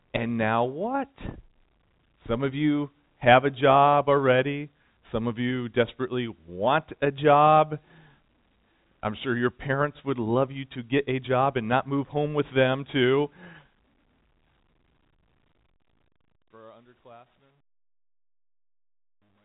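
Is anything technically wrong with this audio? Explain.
No, nothing stood out as a technical problem on listening to this speech.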